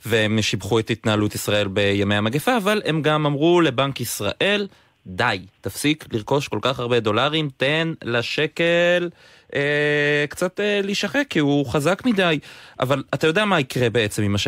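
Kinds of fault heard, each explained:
No technical fault is audible anywhere in this speech recording.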